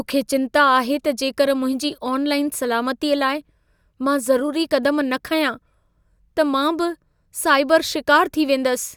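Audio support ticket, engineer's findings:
No faults found in recording.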